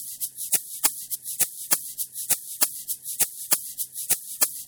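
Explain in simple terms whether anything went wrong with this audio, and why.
The audio has two kinds of fault.

Integer overflow: the loudest parts went past the largest number the system can store, and instead of being capped they wrapped round to the opposite extreme. You hear harsh, violent cracks at 0.54–0.86, 1.42–1.73, 2.32–2.63, 3.22–3.53 and 4.12–4.43 seconds.

Compressed frames skipped: at 1.14 seconds the player dropped about one small block of the compressed audio, roughly 30 milliseconds' worth, so the sound jumps slightly ahead.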